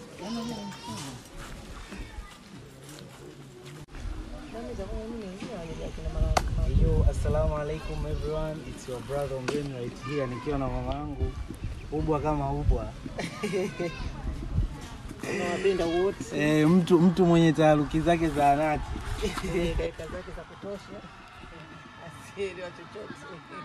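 From 10.92 to 11.21 s, and again from 19.87 s to the end, the level falls abruptly by about 6 dB; the first time it then snaps back. The likely cause is one channel dropping out before the mono sum. Unlike a plain gain dip, it is a sudden, fixed step, and anything present only in that channel vanishes rather than just getting quieter.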